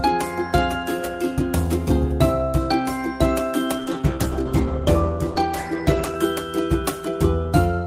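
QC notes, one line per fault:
3.78–6.23 s, call bitrate drop: the audio abruptly turns coarser and duller, with the top end cut away and a rough, watery texture, holding at its worst for about 2.4 s before clearing. This fits the encoder being told to fall from around 48 kbps to roughly 14 kbps after the bandwidth estimate sank. At that rate Opus quantises far more crudely and narrows its coded bandwidth, which is why the sound is muffled until the bitrate recovers.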